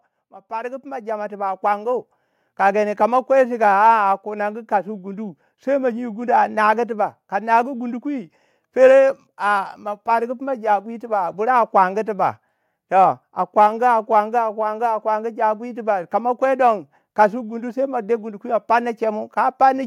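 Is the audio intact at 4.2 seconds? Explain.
No. At 4.2 seconds the speech sits inside a stretch of automatic gain rising that runs from 0.47 to 8.14 s. The automatic gain control judged the input too quiet and kept raising its gain. The lift comes slowly, not as a step. By the end it adds about 9 dB. The speech and the background noise swell together. At 4.2 s the level is still climbing.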